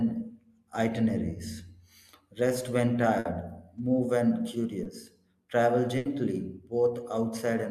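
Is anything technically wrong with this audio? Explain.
Yes. Three network dropouts interrupt the speech, of two kinds.

Burst of packet loss occurs at 3.19–3.27 s and 5.97–6.07 s. Consecutive packets were lost or arrived too late, so the receiver stretched the last sound into a fading buzz or hiss for 60 and 80 ms, and that much speech is skipped. Spectrograms show smeared, flat harmonics thinning out, then an abrupt jump.

Short concealed packet loss appears at 4.83–4.87 s. About 20 ms was synthesized from the preceding sound and crossfaded back, leaving a brief wobble or smear. The spectrogram shows a faint blur with no hard edge.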